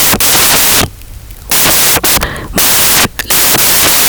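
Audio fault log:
Throughout: samples built from the wrong bytes. The speech comes with loud, harsh broadband noise. The reader assembles each sample's bytes in the wrong order or alignment, so the rapidly changing low bits end up as the dominant part of every value.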